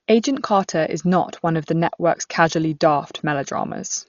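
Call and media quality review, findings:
Speech throughout: dull and band-limited, with nothing above 7 kHz, and heavy rough, fluttering noise around tonal components. Likely Dolby Digital compression at a starved bitrate, fitting roughly 40 kbps. The encoder drops the top band and leaves many frequency lines without mantissa bits, and the decoder fills them with dither noise.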